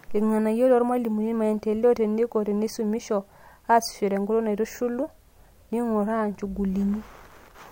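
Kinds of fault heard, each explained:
No technical fault can be heard anywhere in this speech recording. There is therefore no kind of fault to list or explain.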